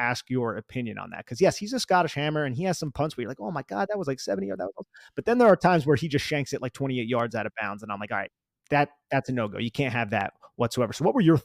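Speech clip with four sharp, isolated clicks at 2.87 s (after "hammer and he has"), 4.13 s (after "that was"), 7.20 s and 10.21 s (after "can't have"), likely dropped samples, each losing only a fraction of a millisecond and making the waveform jump.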